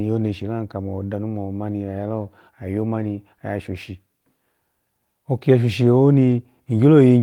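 Just after "oyomoni oya" at 3.73 s, and again after "oki ya shoshi" at 6.31 s, there is a lost packet rebuilt from error correction. Each time, a 20 ms stretch, which fits a single lost packet, was replaced by the low-bitrate backup copy carried in the following packet. The sound briefly turns rougher and noisier but never drops out. Concealment by guesswork would instead smear or repeat the preceding sound, and a plain dropout would leave an audible hole.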